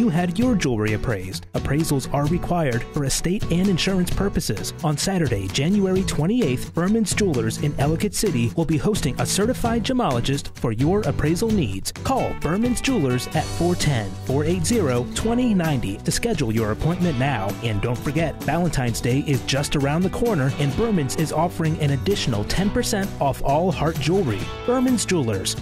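At 0.39 s a DC step shifts the waveform's zero line by about -28 dBFS, heard as a low thump, then the offset decays away through a 2 Hz high-pass.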